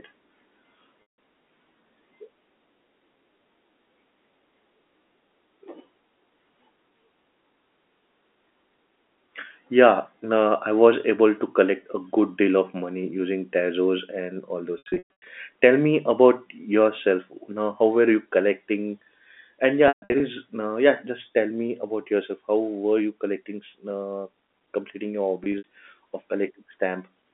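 Packet loss with pitch repetition occurs four times in this speech. At 1.02 s, a 160 ms gap is bridged by repeating the last pitch period, giving a brief held buzz. From 14.78 to 15.26 s, losses totalling 380 ms are scattered, the longest run 120 ms. From 19.88 to 20.20 s, 240 ms is lost, with runs up to 140 ms. At 25.44 to 25.64 s, 100 ms is lost. Longer runs fade toward silence before the speech cross-fades back, over the band-limited telephone line.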